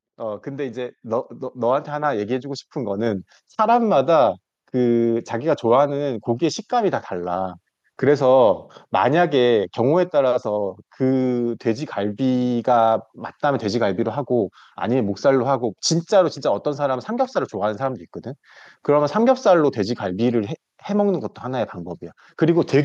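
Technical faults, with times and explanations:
1.02 s, microphone volume stepped up: the call software raised the microphone's input gain in one step, so speech and background jump together by about 6 dB.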